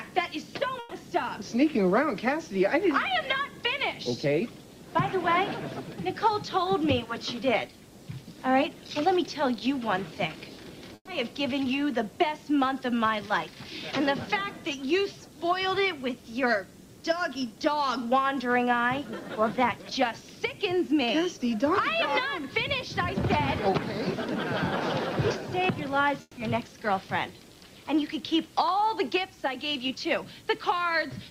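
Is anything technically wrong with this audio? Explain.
Yes. The audio has network faults.

At 0.79 s and again at 10.95 s there is a burst of packet loss, each lasting about 0.14 s. Several packets in a row never arrived in time. The receiver extended the last sound for 120 ms, fading it down, so it becomes a brief held buzz or hiss. About 120 ms of material is gone. The second gap also ends in 50 ms of silence before the audio resumes further on.

From 26.21 to 26.39 s the sound stops and is replaced by a fading continuation lasting 160 ms, then 20 ms of silence. When it returns, 160 ms of material is missing. The likely cause is a long network dropout. No data arrived for this stretch, so the receiver could only repeat and fade the last sound before falling silent.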